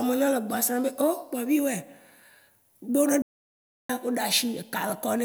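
At 3.22 s the speech just drops out and stays silent until about 3.90 s, a gap of roughly 670 ms, which is a classic playback stall. The player likely ran short of data or had its thread held up, so nothing reached the output until it caught up again. You hear a clean cut mid-flow, and then the audio picks back up.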